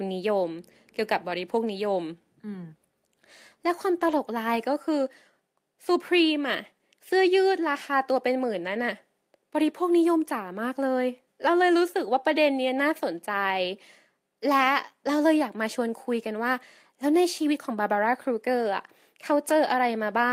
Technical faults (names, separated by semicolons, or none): lost packet rebuilt from error correction